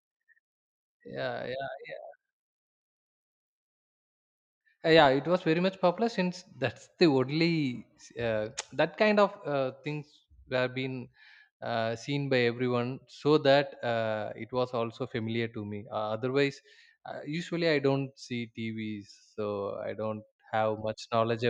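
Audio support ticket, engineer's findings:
Nothing stood out on listening to the speech; no symptom found to log against any component.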